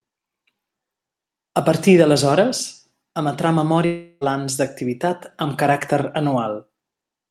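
Speech, where from 3.85 to 4.24 s the sound turns into a fading buzz instead of silence and then resumes with 360 ms lost, likely a long network dropout.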